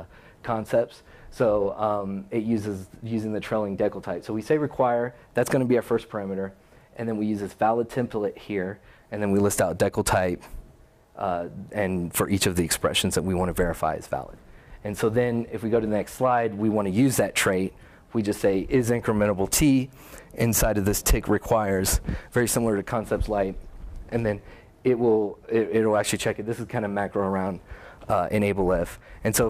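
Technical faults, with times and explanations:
No technical faults can be heard in the signal at any point.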